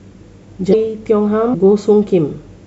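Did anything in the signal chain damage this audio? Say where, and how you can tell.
Yes, codec stage: damaged data in a compressed stream causes glitches at 0.70–0.74 s and 1.51–1.55 s, smeared spectrogram blocks where the decoder lost frame sync.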